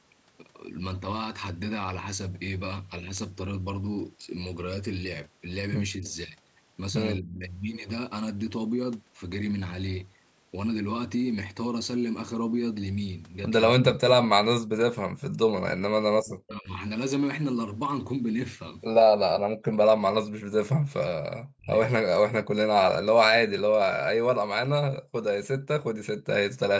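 At 5.98 to 6.06 s the speech dips briefly, by roughly 10 dB. This is speech suppressed in double talk. The likely cause is an echo canceller that heard both sides at once. It could not tell the talker from the loudspeaker echo, so it turned everything down.

Overlapping this, at 6.04 to 6.12 s, a faint echo leak appears. A copy of the voice returns 250 ms late, very quiet, roughly 35 dB below the speech. It likely comes from a far-end canceller that left some loudspeaker pickup in its microphone signal.

The same double-talk suppression returns at 7.19 to 7.47 s, 13.76 to 13.98 s, 15.74 to 16.69 s and 21.56 to 21.74 s. These cuts are deeper, up to roughly 40 dB. The longest lasts about a second.

At 25.01 to 25.14 s the room sound itself vanishes. It falls by about 40 dB for a moment, then comes back. This is background gated by the echo canceller. The canceller clamped the microphone hard while the loudspeaker played, then released it.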